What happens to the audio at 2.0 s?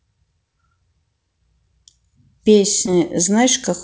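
Nothing goes wrong at 2.0 s: the speech carries on intact through the call path, with its G.722 coding and top end limited to 8 kHz.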